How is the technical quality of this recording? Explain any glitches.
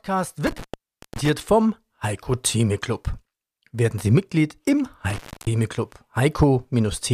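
Two dropouts from an intermittent contact break up the speech. At 0.47 to 1.29 s and 5.10 to 5.47 s, a loose connection opens for about 568 ms and 287 ms. Crackle marks each edge, with faint hiss in the gap.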